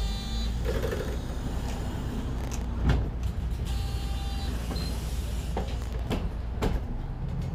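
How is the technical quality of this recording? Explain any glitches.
The recording has two short bursts of processor overload crackle, at 2.38 to 2.64 s and 5.82 to 6.11 s. The processor missed a run of sub-millisecond buffer deadlines, leaving many tiny silent gaps. These are heard as gritty tearing rather than one clean dropout.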